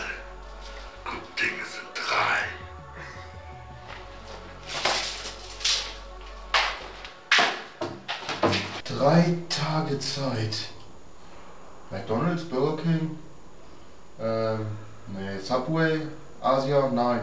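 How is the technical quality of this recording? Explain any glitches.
No glitches can be heard anywhere in the recording. It has come through a call connection, and the top end stops at about 8 kHz, which fits a wideband call codec such as G.722.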